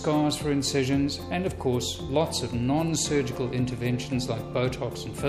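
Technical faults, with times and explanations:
Nothing technical stands out here; it's a good listen with no problems to flag at any point.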